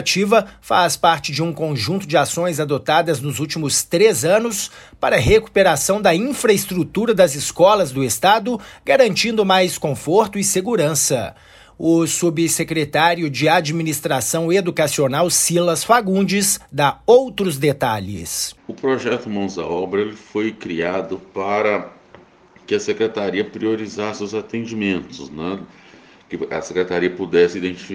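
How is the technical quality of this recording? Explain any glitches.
Nothing glitchy turns up anywhere in the recording, so there's nothing here that needs explaining.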